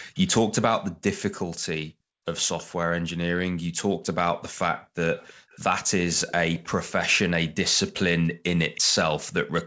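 At 0.14 to 0.19 s, a faint delayed copy of the speech appears, about 317 ms behind the original and well below it in level. This is an echo leak. The likely cause is a far end playing the call on a loudspeaker, with its echo canceller failing to remove everything its microphone picked up. From 1.84 to 2.25 s, the room background sinks by about 40 dB and then comes back. This is background gated by the echo canceller. The canceller pulled the microphone down hard while the loudspeaker played. The dip totals roughly 0.4 s.

At 2.59 to 2.63 s, another short scrap of the echo slips through, somewhat louder, still 317 ms late. The background drops away again from 3.41 to 3.75 s, for only a brief moment in total. It falls again from 4.78 to 5.5 s, for about a third of a second of that span.

From 5.18 to 8.81 s, the echo leak turns into a longer stretch. A quiet trailing copy follows the speech at the same 317 ms lag. 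Inside that stretch, at 8.31 to 8.44 s, the background is gated once more by about 40 dB. Throughout, the sound stops at 8 kHz, which fits a G.722 call path.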